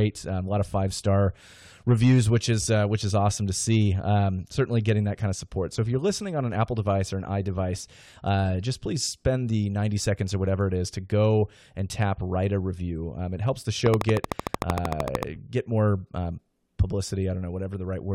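Interference from nearby equipment or a faulty connection or power supply is likely injecting pulses into the audio, producing a train of clicks from 13.86 to 15.24 s: about twenty similar ticks at a regular 13.2 per second, standing roughly 15 dB above the surrounding sound.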